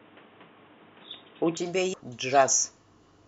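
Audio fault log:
0.00–1.57 s, input switched to a poorer device: the sound is dull and boxy, with nothing above 3.8 kHz, a faint added hiss far below the signal, and a level a few dB different, then it clears at 1.57 s with no gap. The likely cause is the system switching to a narrower-band microphone or headset profile.
1.94 s, CD skip: a tiny tick, a mute of only a couple of milliseconds, then the sound carries on from a different point. The laser jumped onto another turn of the disc's spiral, so playback jumped instead of continuing smoothly.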